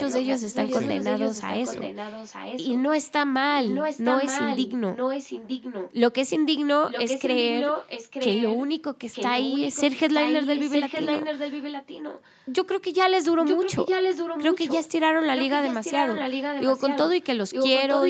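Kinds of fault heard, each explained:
Echo leak: the speech returns as a delayed copy about 0.92 s later, usually only a little quieter and around 13.4 to 14.9 s as loud, likely a far-end loudspeaker's echo getting past its canceller; spectrograms show each syllable pattern repeated 0.92 s on.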